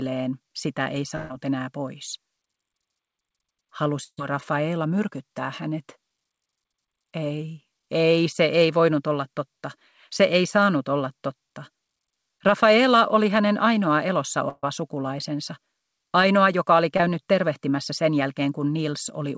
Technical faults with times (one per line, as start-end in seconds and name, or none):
1.16-1.32 burst of packet loss
4.04-4.19 burst of packet loss
14.49-14.66 burst of packet loss
16.97-17.01 short concealed packet loss